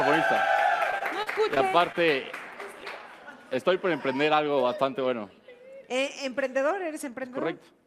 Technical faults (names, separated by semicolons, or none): repeated packet loss (robotic sound)